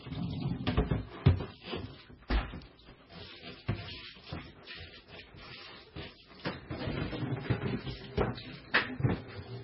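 From start to finish the sound is dull and watery, with nothing above 5.6 kHz and a swirling, chirpy smear on transients. That is likely heavy MP3 compression at a very low bitrate, around 16 kbps, where the encoder drops the treble and flickers weak frequency lines between frames.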